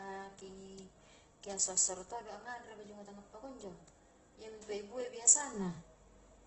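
Throughout, the speech is rough and grainy, with nothing above 8.1 kHz. This is heavy damage, likely from Opus compression at about 12 kbps; it sounds noisy rather than swirling like MP3.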